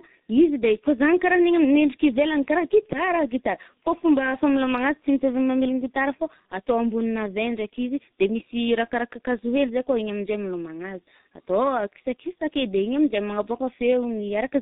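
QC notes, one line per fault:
Throughout: tandem speech coding, with G.723.1 re-coding G.726's output, compounding roughness, muffling and warble beyond one codec, nothing above 3.8 kHz.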